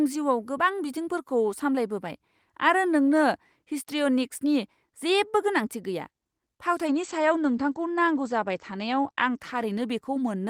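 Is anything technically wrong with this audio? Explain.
Yes, there's a call bitrate drop from 6.89 s to the end. The bandwidth estimate fell and the encoder got starved, which fits a drop from 32 to 14 kbps. The speech coarsens and the top end shrinks from 20 kHz to 8 kHz, so it sounds muffled and rough.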